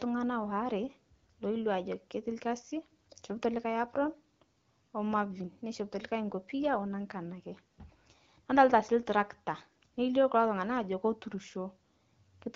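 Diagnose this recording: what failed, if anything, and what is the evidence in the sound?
Nothing failed here: the speech comes over an AMR wideband (HD Voice) link at 12.65 kbit/s, and nothing in the recording points to a fault at any stage of the chain.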